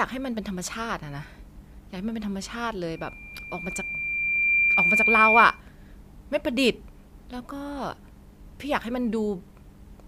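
From 2.95 s to 5.61 s a loudspeaker feedback squeal rises at 2.4 kHz. The microphone is picking up its own loudspeaker, and at that one frequency the loop gain passes unity, so the tone feeds on itself. It swells over roughly one and a half seconds to around 10 dB above the speech. That growth tells it apart from a fixed interfering whistle, which would sit at constant level from its first instant.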